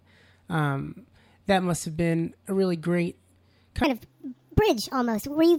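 From 3.84 s to the end at 5.58 s, a section at the wrong speed plays the speech 1.42 times too fast, raising pitch about seven semitones, likely from a wrong clock rate. A spectrogram shows harmonics and formants stepping abruptly upward, with syllables squeezed together.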